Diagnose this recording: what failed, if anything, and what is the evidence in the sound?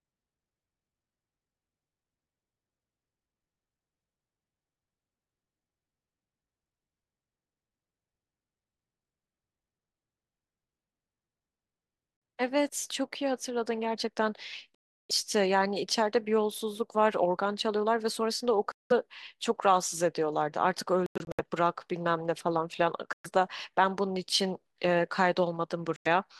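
The speech cuts to silence six times, at 12.17 s (about 46 ms), 14.75 s (348 ms), 18.72 s (186 ms), 21.06–21.40 s (several short holes, longest 93 ms), 23.13 s (116 ms) and 25.96 s (93 ms). The cause is likely a Bluetooth dropout on the wireless link to playback: late packets were discarded and the speech resumed as though it had kept running. On the waveform these are flat gaps, and on the spectrogram they are full-band blank vertical stripes.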